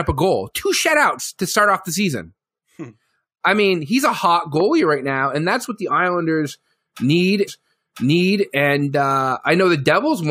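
At 4.60 to 4.62 s there's a single loud pop, a sharp click-thump peaking about 10 dB above the speech, which keeps going underneath it. It's likely a voltage spike from a switch, plug or static discharge that got shaped by the downstream electronics into that short burst.

Then from 7.47 to 8.46 s you get a stream segment repeated: the player jumps back and plays the same second of speech again, with a small blip at the join. The same chunk was probably fetched or queued twice, adding about a second to the clip.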